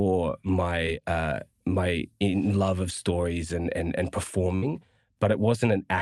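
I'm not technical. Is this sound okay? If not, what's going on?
No, there are two small dropouts of the kind you get on an internet call.

The first is a short concealed packet loss from 0.86 to 0.88 s. About a hundredth of a second of the speech never arrived in time, so the receiving end invented a stand-in by stretching the sound just before it, then blended back into the real speech. You hear it as a tiny smear or wobble rather than a clean gap.

The second, from 4.55 to 4.63 s, is a burst of packet loss. Several pieces of audio in a row went missing, about 60 ms in total. The receiver again filled the hole by carrying the previous sound forward while fading it down, which comes across as a brief held buzz or hiss. The speech then resumes slightly further on, and that stretch of speech is gone for good.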